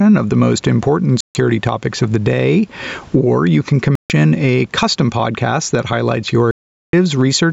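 Throughout the speech, gain pumping is audible, with the level swinging by around 10 dB. This is likely an input gain set far too high, with a fast limiter pulling the level down on every peak and squashing the dynamics.

Three Bluetooth dropouts follow, likely from audio packets reaching the headphones too late to play. The output falls silent from 1.21 to 1.35 s, between "of the most important" and "topics of the day", and again from 3.95 to 4.10 s, between "you can" and "a custom podcast that". Each gap is 145 ms long. The longest, 421 ms, runs from 6.51 to 6.93 s after "podcast that highlights your". Each time, the speech resumes as though it had continued underneath.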